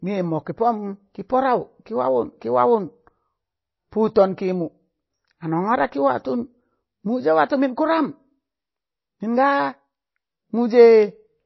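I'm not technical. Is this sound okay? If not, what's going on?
No. From start to finish the speech sounds dull, watery and swirly, with hissy s sounds turning metallic and nothing above about 5.8 kHz. This is likely MP3 compression squeezed too hard, removing treble and detail to make the file smaller.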